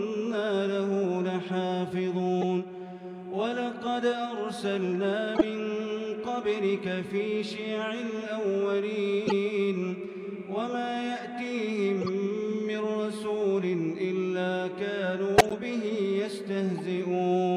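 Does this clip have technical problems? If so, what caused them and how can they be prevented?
Yes. Corrupt frames were decoded and played, heard as brief chirps and noise bursts at 2.41–2.44, 5.35–5.46, 9.27–9.32, 12.01–12.09, 15.37–15.53 and 16.78–16.80 s. Flipped bits put energy at wrong frequencies, peaking near -10 dBFS. Prevent it with checksums so damaged frames are concealed, not played.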